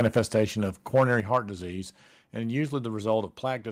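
Harsh, crackling edges mark the loudest parts of this speech from 0 to 0.41 s and again from 0.95 to 1.38 s, just before "disease and". The likely cause is microphone overload, with peaks driven about 5 dB and about 4 dB past the converter's ceiling so that a small share of samples have their tops sheared flat. Abrupt drops in the whole level, background included, follow at 0.19 s (about 2 dB), 1.2 s (about 6 dB), 2.22 s (about 1 dB) and 3.24 s (about 2 dB). These are likely the microphone volume being stepped down by the call software as it reacts to the overly hot input, each time cutting the device's gain in a single step.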